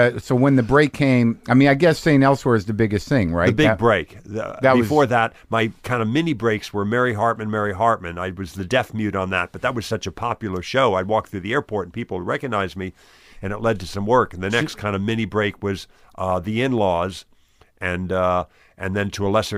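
No technical faults can be heard anywhere in this recording.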